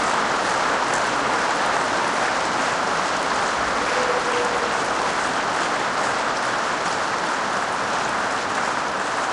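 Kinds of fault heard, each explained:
Wrong sample rate: The audio is being played back at a slower rate than it was captured at, and nothing converts between the two. The recording appears to have been made at 48 kHz and played at 32 kHz. Every sample therefore lasts longer than it should. The whole clip runs at about two thirds of its proper speed. Pitch falls with it by about seven semitones, close to a fifth. Everything sounds lower and slower from start to end.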